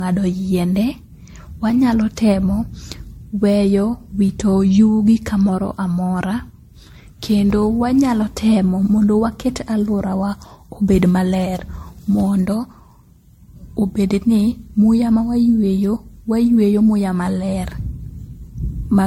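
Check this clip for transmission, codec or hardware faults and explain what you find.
The speech has a codec fault that runs through the whole clip: generation loss. It sounds swirly, smeared and hollow, with consonant attacks blurred and nothing above 16.5 kHz. This is likely the result of lossy MP3 coding repeated about seven times, at rates that suggest roughly 62 kbit/s. Each decode and re-encode quantises again on a shifted frame grid, so noise and spectral holes accumulate beyond what that bitrate alone would produce.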